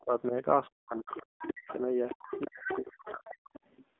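The whole clip passes through the AMR narrowband mobile codec. Nothing is heard above 3.7 kHz, and the line band runs from about 250 Hz to 3.6 kHz. The codec damage is plainly audible. The speech sounds buzzy and synthetic, which fits a low AMR-NB mode near 7.4 kbps. At that rate the vocal-tract model gets few pulses per frame. The call's microphone processing trims the lowest bass, as expected.

From 0.00 to 0.33 s, then 0.69 to 2.17 s, and again 2.38 to 3.50 s, the talker's speech is suppressed in double talk. The level dips by up to about 30 dB in the first stretch and about 40 dB in the later two. The speech is turned down for roughly a fifth of a second early on and about a second in each later stretch. The likely cause is an echo canceller treating both voices as echo while both sides talk.

The other side's voice leaks through from 1.06 to 1.74 s and from 2.09 to 2.77 s. It sits roughly 15 dB and then 10 dB below the speech. 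It returns in short scraps at 3.03 to 3.11 s, 3.27 to 3.35 s and 3.53 to 3.60 s, each fainter, down to about 25 dB below. They are likely loudspeaker echo that the canceller failed to remove from the microphone.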